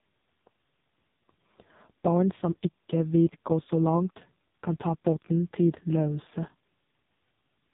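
From start to finish the speech carries the sound of the AMR narrowband mobile codec, heavily damaged. Nothing above 3.8 kHz survives, and the voice turns buzzy and synthetic because a vocal-tract model driven by sparse pulses rebuilds it frame by frame. The heavy damage points to the lowest rate, about 4.75 kbps. A plain telephone band filter would dull the voice but keep it natural; this buzzy, artificial texture marks the codec.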